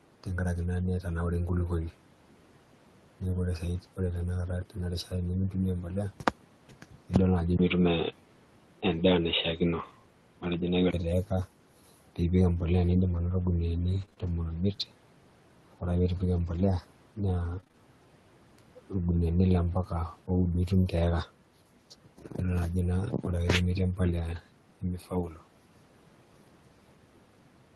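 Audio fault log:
4.05–4.19 s and 24.15–24.37 s, lost packet rebuilt from error correction: No gap is heard at either point. Instead the sound turns briefly rough and grainy. Packets went missing, and the decoder played the lower-bitrate backup copies carried in the packets that followed. The first patch covers 80 ms, which fits four 20 ms frames. The second covers 120 ms, which fits six. Those thin copies carry less detail than the Opus stream around them, so the rebuilt stretches sound coarser and noisier.
6.69–7.11 s, 22.06–22.37 s and 24.81–25.41 s, speech cut by the noise suppressor: In each of these spans, parts of the speech sink into the background and sound swallowed. The suppressor mistook low-energy speech for noise and turned it down with the room noise. The deepest cuts are about 12 dB in the first span, about 10 dB in the second and about 12 dB in the third. Around 150 ms, 150 ms and 400 ms of speech are dimmed, so soft consonants and trailing sounds go faint.
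7.57–10.93 s, input switched to a poorer device: At 7.57 s a silence of about 20 ms is heard, and then the speech turns dull and boxy until 10.93 s. The band narrows in this stretch, below the wider band the 24 kbps Opus path carries elsewhere. Loudness stays about the same, but a new noise floor appears, roughly 40 dB under the speech. This likely comes from the input changing to a narrower-band microphone, such as a headset's call profile, and then returning.
13.09–17.75 s, scattered short gaps: About seven small hiccups and smears are spread through this span, each a few tens of milliseconds at most, with the longest around 30 ms. Packets arrived late or not at all, one at a time. The receiver filled each hole by stretching the last sound it had, around 150 ms of filler in all. That is only a small share of the span, so the speech stays clear between the brief ticks.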